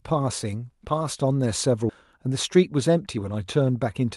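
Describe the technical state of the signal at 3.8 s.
At 3.8 s the speech comes through intact, with no dropout, glitch or other fault, only the ordinary character of the call codec path it passed through.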